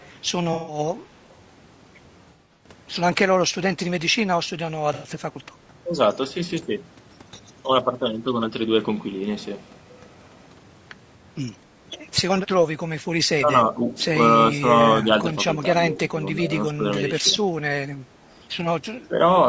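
Throughout, the speech has a rough, grainy texture, with noise filling the gaps between the voice's harmonics and a top band that sounds thinned and somewhat synthetic. This is likely low-delay AAC compression of the AAC-ELD kind used in video calls, at a rate that fits around 32 kbps. Its short frames resolve pitch poorly. The band stops at 8 kHz, as expected from the call path.

At 0.0 to 0.08 s, and again at 1.29 to 1.34 s, a faint copy of the voice trails 242 ms behind, at about -35 dB and then about -40 dB relative to the speech. These are brief scraps, most likely echo leak: a far-end loudspeaker's sound got past that side's echo canceller and came back. Its fixed delay sets it apart from room reverberation.

AAC frame loss with concealment appears at 0.53 to 0.79 s, where about 150 ms goes missing, then at 2.24 to 2.69 s, where 240 ms of loss is scattered over 360 ms with runs up to about a tenth of a second, and at 4.94 to 5.08 s, where 90 ms goes missing. 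The decoder patched each gap from the last good spectrum, so these spots sound smeared and phasey rather than silent. That distinguishes them from the steady grain of the codec.

From 13.37 s on, the voice repeatedly dips, losing level and brightness. The dips fall at 13.37 to 13.88 s (about 10 dB at most), 14.31 to 14.68 s and 15.03 to 15.27 s (about 5 dB each), 15.62 to 16.85 s (the deepest, about 15 dB), 17.2 to 17.39 s (about 5 dB) and 19.08 to 19.15 s (about 10 dB). This is likely speech suppressed in double talk: the echo canceller couldn't separate the talker from the other side's overlapping speech and turned both down. Unlike the frame-loss patches, the sound is not smeared and simply gets quieter.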